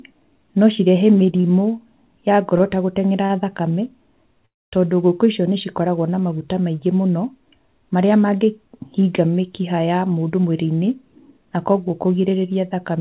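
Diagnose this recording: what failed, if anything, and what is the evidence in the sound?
A short stall from a late packet occurs at 1.40 to 1.46 s, a network delay that emptied the jitter buffer. The receiver stretched the last sound for 33 ms and then resumed with nothing lost. On a spectrogram this appears as a brief smeared, repeated frame.

A call audio freeze runs from 4.46 to 4.74 s, likely caused by packets held up in the network. A brief fading buzz gives way to about 240 ms of silence. Then the audio resumes at "ngũkũ icio nĩcikoragwo na". The waveform shows a flat gap, and nothing is missing.

A jitter buffer speed-up runs from 9.94 to 12.30 s at 110% speed, with roughly a third of a second trimmed away. The receiver cut many short pitch-period pieces to reduce its backlog, so the sound is hurried but keeps its pitch. Harmonics stay level on the spectrogram while events arrive closer together, all below the 4 kHz ceiling of the G.711 call path.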